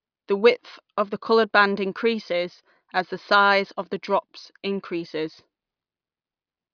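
Listening closely to the speech, nothing stood out as a technical fault at any point.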